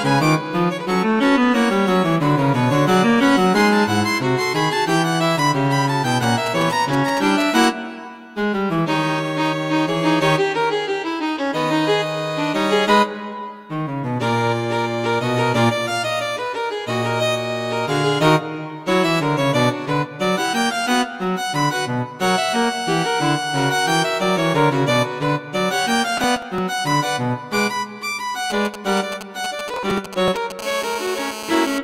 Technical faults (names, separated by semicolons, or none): GSM signalling bursts; processor overload crackle; GSM phone buzz